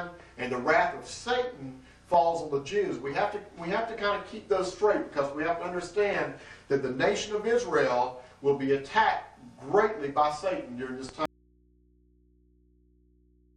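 At 11.26 s the sound cuts out abruptly and never returns. This is an audio dropout to a faint residue. The gap holds only mains hum, roughly 35 dB below the signal. Likely the source was lost while the input stayed open.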